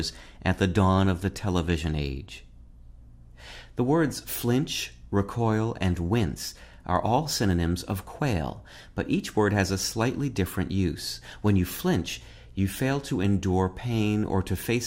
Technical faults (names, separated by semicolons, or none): DAB burbling